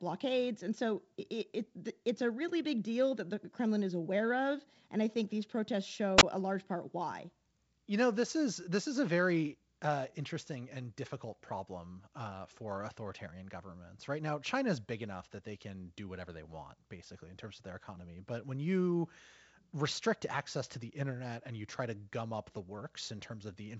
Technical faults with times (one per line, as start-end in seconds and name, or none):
6.17-6.23 wireless microphone squelch dropout